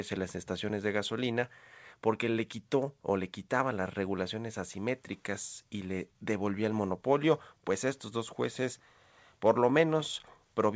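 No faults found in this speech clip; it has come through a WebRTC call path and carries nothing above 8 kHz, which fits a wideband codec such as G.722.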